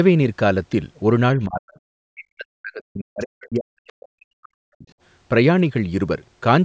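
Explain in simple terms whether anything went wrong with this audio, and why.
The talker's voice sinks away twice, very deeply, almost to nothing. First briefly from 1.46 to 1.71 s, then for a long stretch from 1.92 to 4.86 s, about three seconds of the sentence pushed far down. This is speech suppressed in double talk. It was likely caused by both people talking at the same moment: the call's echo canceller couldn't tell the talker apart from the other side's voice coming out of the loudspeaker, so it turned everything down.

Right at the end of the first dip, from 1.69 to 1.8 s, a faint scrap of a second voice slips through underneath, much quieter than the talker. This is the other side's voice leaking through. The device was playing the other person aloud, and the echo canceller likely failed to scrub all of it from the microphone, so a short fragment got sent back.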